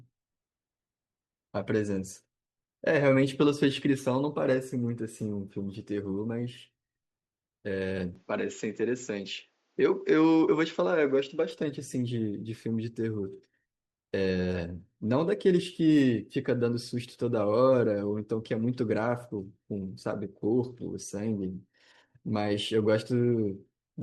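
The input likely switched to a poorer device from 8.16 s to 11.51 s, so the speech passes through a different, narrower-band microphone path for those few seconds. Nothing above about 7.6 kHz gets through, which dulls the top of the voice and gives it a boxy cast. The change happens without any gap or noticeable jump in loudness, and a faint new noise floor appears, sitting about 45 dB below the speech.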